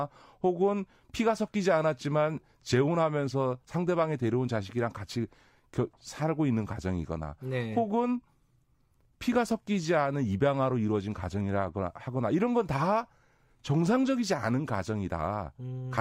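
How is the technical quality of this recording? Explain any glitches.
The technical quality of this recording is sound, with no glitches to explain.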